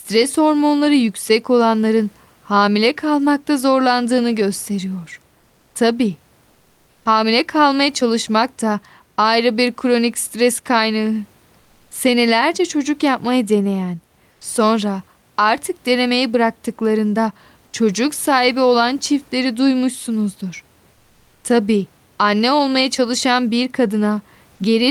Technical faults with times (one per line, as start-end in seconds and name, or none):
6.51-7.03 comfort noise in place of the background
11.59-11.91 comfort noise in place of the background
14.31-14.39 comfort noise in place of the background
20.95-21.43 comfort noise in place of the background